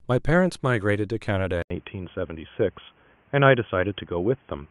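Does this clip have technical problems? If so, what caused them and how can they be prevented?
Yes. At 1.62 s the speech cuts out for 80 ms. It then sounds dull and boxy until the end, with nothing above 3.4 kHz and faint new background noise. This is likely an input switched to a poorer device. Lock the recording to one microphone and turn off automatic input switching.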